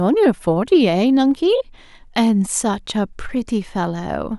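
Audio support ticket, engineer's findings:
Nothing to flag on this speech recording; no dropouts, glitches or level problems turned up anywhere, so there's no component to chase.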